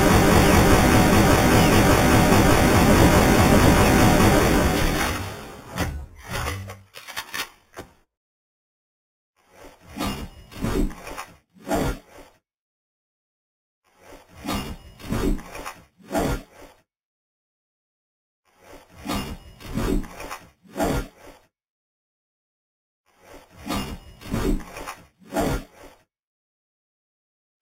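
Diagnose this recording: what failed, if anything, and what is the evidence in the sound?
Imaging from sample-and-hold upsampling throughout, at sample-rate conversion: a metallic fizz mirrored into 4 to 8 kHz, about 15 dB down, fits unfiltered sample repetition from 8 kHz.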